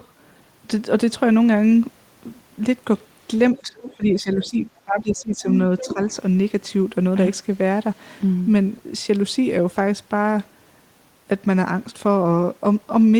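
From 3.54 to 5.48 s the speech is suppressed in double talk. For about a second and a half in total the level sinks by as much as about 20 dB, likely because the echo canceller mistook the talker for loudspeaker echo and turned both down. On the waveform the envelope pinches in patches, and on the spectrogram the upper bands thin out.

Inside that span, at 3.87 to 3.95 s and 4.33 to 4.49 s, the other side's voice leaks through faintly, about 20 to 25 dB below the speech. This is likely residual echo the canceller missed. It shows as short, weak smears with their own harmonic striations.

At 5.79 to 5.94 s a louder leak, about 10 dB under the speech, likely from the same incomplete cancellation, overlaps a brief suppression from 5.82 to 5.99 s. That suppression, likely another double-talk misjudgement, dips the speech by about 10 dB and shows as a narrow notch in the envelope.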